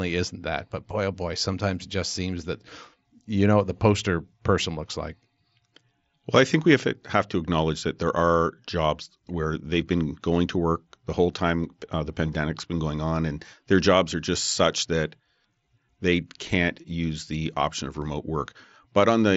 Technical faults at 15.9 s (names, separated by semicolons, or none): none